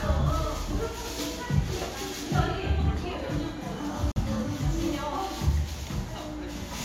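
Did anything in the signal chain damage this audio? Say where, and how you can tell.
Yes: a digital broadcast dropout at reception. From 4.11 to 4.21 s the audio fades out in about 3 ms and leaves a flat gap, a blank vertical band on a spectrogram. The roughly 43 ms of lost audio fits a single failed frame.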